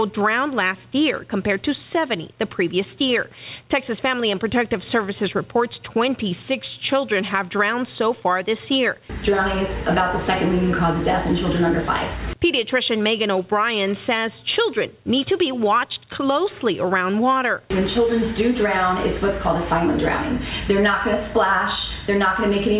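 No faults can be heard anywhere in the clip. It has passed through a WebRTC call path that is working normally, and nothing is heard above 4 kHz, which fits a narrowband G.711 A-law codec at 64 kbps.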